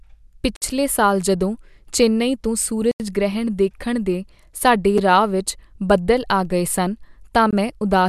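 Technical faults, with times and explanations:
0.56–0.62, 2.91–3.00, 4.98 and 7.51–7.53 s, block of digital silence: abrupt 55, 85, 6 and 21 ms dropouts from an unfilled buffer or invalid samples, the 6 ms one heard as a tick. Each shows as a flat waveform line and an empty vertical band on the spectrogram.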